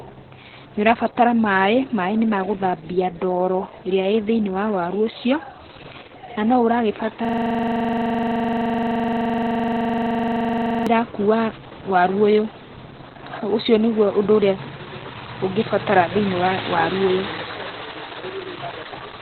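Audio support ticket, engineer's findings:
Opus voice compression, whole clip. Speech muffled, hoarse, slightly robotic. Nothing above about 4.3 kHz, so narrowband. SILK linear-prediction coder likely carrying the voice alone, with the excitation coded coarsely. Damage heavy, consistent with a bitrate near 8 kbps on the call or recording path. Encoder dropped the upper band to save bits.

System hang loop, 7.25–10.87 s. The same 42.67 ms slice repeats exactly, giving a machine-gun stutter at 23.4 Hz. Loop length fits a 2048-sample ring buffer. Host or driver stalled while the audio hardware kept replaying that buffer, about 85 passes, until processing resumed.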